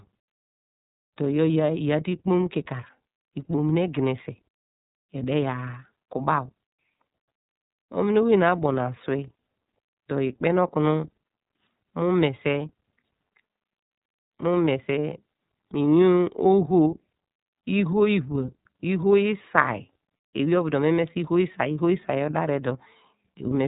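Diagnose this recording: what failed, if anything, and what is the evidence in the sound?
Codec stage: the iLBC codec is plainly audible throughout, with rough, synthetic speech and nothing above 3.8 kHz, which fits 13.33 kbps iLBC coding each 30 ms frame independently.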